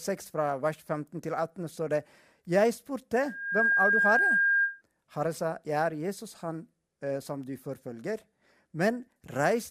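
Speech with loudspeaker feedback squeal from 3.19 to 4.82 s. A mic-to-speaker loop rings at 1.6 kHz, swelling over about half a second to a few decibels above the voice. A spectrogram shows a bright horizontal line at 1.6 kHz, and the waveform shows a swelling envelope.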